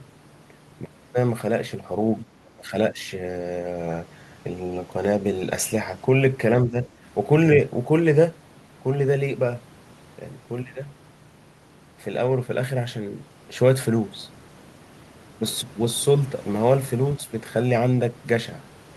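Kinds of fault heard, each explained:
Speech suppressed in double talk: the speech sinks in brief dips, by about 25 dB for half a second near 2.2 s and more gently near 2.9, 6.7 and 17.2 s, likely an echo canceller mistaking the talker for loudspeaker echo during overlap.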